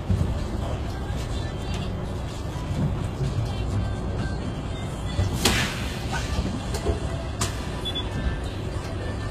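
Throughout, the treble sounds gritty and metallic, and nothing reaches above 14.9 kHz, likely from HE-AAC compression rebuilding the upper spectrum from copied lower bands at roughly 20 kbps.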